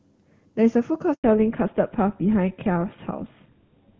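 At 1.14 s the speech cuts out abruptly for 100 ms, until 1.24 s. This is a handover gap: while the call switches networks, no speech frames arrive, so the audio collapses to silence and whatever was said in that interval is lost.

From 1.24 s to the end, the call falls back to narrowband. Before the gap, the speech carries the clean, wideband character of AMR wideband (HD Voice) coding at a high rate, consistent with about 23.85 kbit/s. Afterwards, nothing remains above 4 kHz, consistent with a GSM full-rate codec, and the speech sounds duller and rougher.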